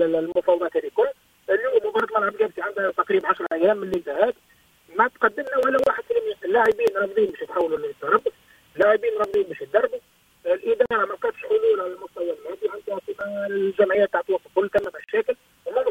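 A gap at a join of encoded pieces appears five times: at 0.32 s (about 31 ms), 3.47 s (49 ms), 5.84 s (29 ms), 10.86 s (50 ms) and 15.04 s (46 ms). Each marks a point where separately encoded segments were butted together untrimmed, so the encoder's start-up delay and last-frame padding remain as dead air. Continuous sound drops out briefly, its edges blurred by the codec, then resumes where it left off.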